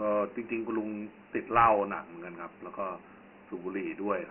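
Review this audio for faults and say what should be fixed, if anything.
Dialogic VOX ADPCM coding runs through the whole clip. The speech was squeezed into 4-bit adaptive differential samples, and the result fits a 24 kbps stream at 6,000 samples a second. That rate leaves nothing above 3 kHz, so the top of the 200 to 3,400 Hz telephone band is lost too. The heavy quantisation makes a gritty, granular hiss that rides along with the speech and rises and falls with it. To prevent it, keep a linear PCM or wideband copy of the recording and convert to VOX only as a final delivery format, at 8,000 samples a second where the system allows.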